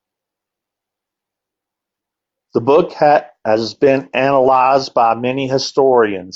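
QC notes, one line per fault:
Nothing to flag here, the speech comes across fine with no faults heard.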